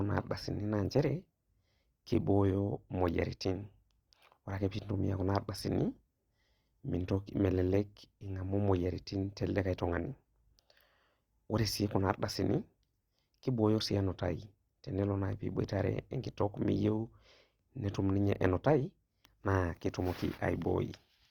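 Throughout the speech the sound is rough and grainy, with a noisy texture on tones but few swirling holes, and content still reaches about 20.2 kHz. This is likely Opus compression in its music mode at a low rate, which fits roughly 24 kbps.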